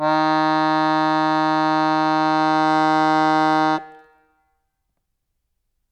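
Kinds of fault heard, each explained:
Hard clipping: The music briefly exceeds what one stage in the chain can pass, so its loudest peaks are sliced flat. Those squared tops add harmonics high up the spectrum. Here the overload is slight, about 1 dB, so it shows as a light crackle or edge on the peaks rather than a constant fuzz. It runs from 2.52 to 3.66 s, then the peaks return to their natural rounded shape.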